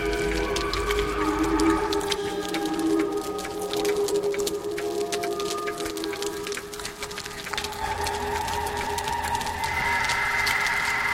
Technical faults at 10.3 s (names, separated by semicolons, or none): none